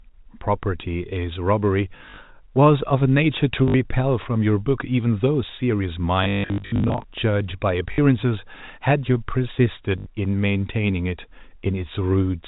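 Packet loss with last packet repeated occurs at 1.98–2.18 s, 3.68–3.74 s, 6.24–7.04 s, 7.92–7.98 s and 9.98–10.06 s. The receiver replays the previous packet, producing robotic stutters that buzz at about 50 Hz, which fits 20 ms packets. A spectrogram shows identical repeated vertical slices, and the waveform shows copied blocks.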